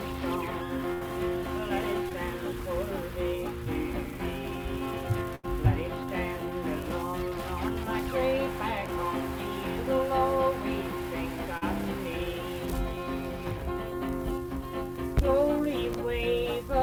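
At 0.93 s the audio briefly turns into a held, fading continuation before cutting forward to 1.03 s. This is a burst of packet loss: about 60 ms of the stream never arrived in time, so the receiver extended the last sound for roughly 74 ms, turning it down as it went, then resumed further along with the missing stretch simply gone.

At 2.09 to 2.12 s there is a tiny smear from short concealed packet loss. About 20 ms failed to reach the decoder, and the receiver patched the hole with roughly 13 ms of continued sound before blending back into the real signal.

The second burst of packet loss, at 5.35 to 5.45 s, is a little longer. The held, dimming tail lasts about 80 ms and covers about 80 ms of audio that never arrived.

At 11.57 to 11.63 s a brief wobble marks a second short concealed packet loss. About 40 ms were lost and filled with roughly 39 ms of synthesised continuation.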